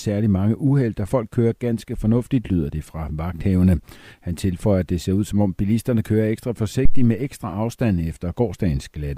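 At 6.85–7.12 s, after "om bilisterne kører ekstra", there is a phantom power thump. A supply step passes through the coupling capacitors, peaking at about −4 dBFS. On the waveform it shows as one large low-frequency swing that decays within 61 ms.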